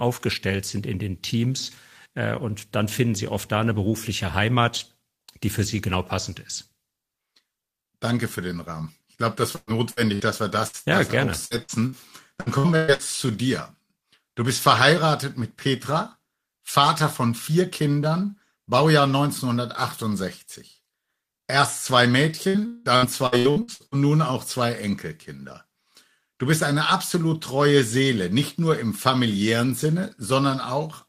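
Choppy, robotic stretches with chunks missing at 9.55–10.76 s, 11.45–13.02 s and 22.48–23.95 s come from repeated packet loss. Each gap was patched by extending the previous sound, concealing up to 45% of the last stretch.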